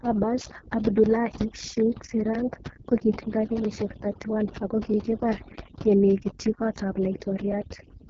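The clip is speech carrying three faults. Overdone noise removal runs throughout. The background is pushed to near silence with twinkling specks, and the quieter parts of the voice are eaten away. The suppressor cuts individual frequency bands whenever they drop close to its noise estimate, so weak speech detail vanishes along with the hiss. Plain low-pass dullness would not sound like this: here the losses flicker band by band instead of cutting off evenly. The AMR wideband (HD Voice) codec also affects the whole clip, and its damage is heavy. The voice is rough and raspy, which points to the lowest AMR-WB mode, around 6.6 kbit/s. There is nothing above 7.4 kHz, and the top band above 6.4 kHz sounds like shaped noise instead of real speech. That rasp is steady and tied to the voice itself, while the noise-removal artefacts swirl in the gaps and weak syllables. Finally, clock drift buffer slips produce a regular click or pop roughly every 1.29 s, from 1.06 s to 7.52 s. 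Their steady spacing separates them from random dropouts. The likely cause is two devices whose clocks disagree by several hundred parts per million, so the buffer between them periodically drops or repeats a block of a few dozen samples.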